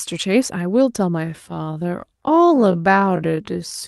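From 1.18 s to the end, the speech abruptly drops to half its pace while its pitch stays where it was, which marks a time-stretched section. The likely cause is software lengthening the audio by repeating short slices. A plain playback-rate slowdown would also drop the pitch by an octave; here it doesn't. The call codec's band limit near 12 kHz is present throughout.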